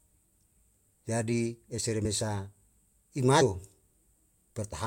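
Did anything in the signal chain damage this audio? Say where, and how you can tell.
Yes, codec stage: compressed frames skipped at 2.04 s and 3.40 s, where roughly 40 ms, then 100 ms, of whole frames vanish.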